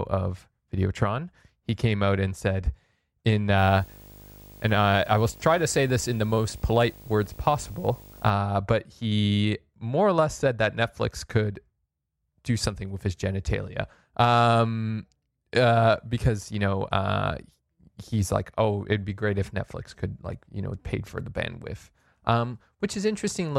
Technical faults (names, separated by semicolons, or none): video or display buzz